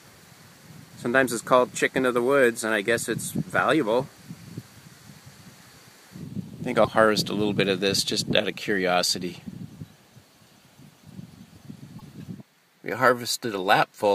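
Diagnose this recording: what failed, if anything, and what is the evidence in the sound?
Broken MP3 bit reservoir at 6.83–6.88 s and 11.98–12.02 s: the sound skips ahead with a glitch, likely because cut frames left later frames missing borrowed data.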